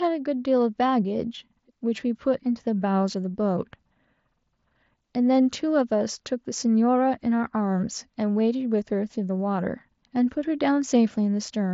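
No faults to report: the speech runs through the Bluetooth mSBC headset link as intended, bandwidth topping out around 8 kHz with only the light graininess that codec leaves on louder passages.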